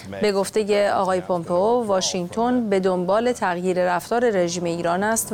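Nothing in the audio stood out as a technical fault on listening.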